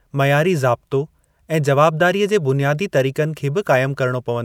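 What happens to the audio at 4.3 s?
Nothing goes wrong at 4.3 s; the speech plays through that moment intact, with no dropout, click or distortion.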